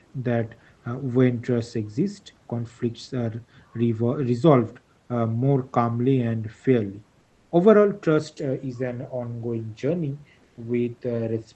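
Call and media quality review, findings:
Comfort noise in place of the background, 10.43–10.57 s: room tone turns flat and featureless at the same level. Likely Opus DTX, with the receiver filling the sender's pause with synthetic noise.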